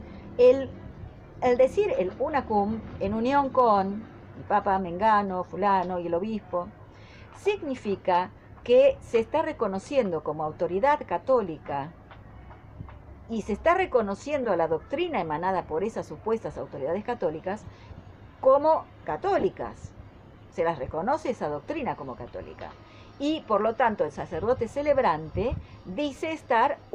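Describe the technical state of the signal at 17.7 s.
Right around there, from 17.61 to 17.66 s, there's a corrupt frame decoded: a few damaged frames played anyway, misplacing energy into a quiet chirpy blip.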